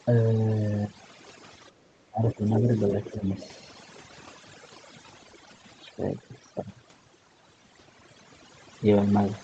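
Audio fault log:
throughout: overdone noise removal. The noise reduction is set too aggressively, so any frequency band sitting close to its noise estimate is pulled far down or switched off entirely. The quiet edges of the speech are removed along with the hiss. The background collapses to near silence broken by twinkling, chirpy specks. The band tops out at 8 kHz, as expected for a wideband Opus call path.
1.72 to 1.82 s: background gated by the echo canceller. For about 100 ms the room sound dips by about 10 dB while the loudspeaker is active. The canceller clamps the microphone gain to keep echo out, and the ambient bed briefly sinks before recovering as soon as the canceller releases.
2.1 to 2.7 s and 3.12 to 3.39 s: speech suppressed in double talk. The talker's level drops, by up to about 15 dB in the first stretch and about 10 dB in the second, over roughly half a second and a fifth of a second of affected audio. 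The likely cause is both sides speaking at once: the canceller cannot separate the near voice from the loudspeaker echo and attenuates everything.
2.54 to 2.61 s and 3.4 to 3.48 s: other side's voice leaking through. Short scraps of a second voice sit under the talker, the first about 10 dB below the speech and the second fainter, around 20 dB down. They are brief. The likely cause is residual echo: the far-end voice plays on the talker's loudspeaker and re-enters the microphone, and the canceller removes most of it but not all, so fragments pass through around the double-talk stretches.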